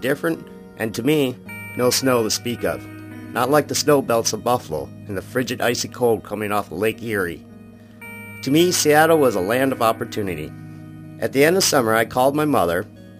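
Imaging from sample-and-hold upsampling throughout: unsmoothed sample repetition, consistent with a doubled rate, mirrors the spectrum into 11 to 22 kHz at about -18 dB, giving a metallic fizz.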